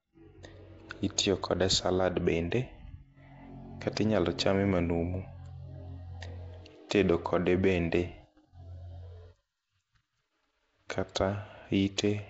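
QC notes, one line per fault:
Throughout, Nellymoser compression: the speech carries a rough, hissy halo and a smeared, underwater quality, with nothing above 7.7 kHz. This points to the Nellymoser Asao codec at around 32 kbps, likely coding short blocks coarsely and filling starved bands with noise.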